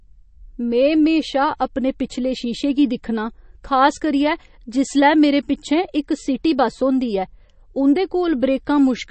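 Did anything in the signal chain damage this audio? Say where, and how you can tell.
Yes. Throughout the speech there is a watery, swirly quality with metallic chirps on s sounds, and nothing above 8.3 kHz. That points to the codec stage, likely MP3 compression at a bitrate around 32 kbps, where the bit-starved encoder cut the treble and let weak frequency lines flicker between frames.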